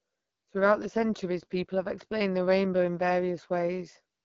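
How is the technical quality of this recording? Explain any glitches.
The recording has audible codec damage throughout. It carries the sound of an AMR wideband (HD Voice) codec at a low rate. Nothing is present above 7.5 kHz. The codec models speech up to 6.4 kHz with a vocal tract filter driven by pulses, then fills the top band with shaped noise. The harshness points to one of the lowest rates, around 8.85 kbit/s. Too few bits reach the pulse excitation, so the speech sounds rough and raspy.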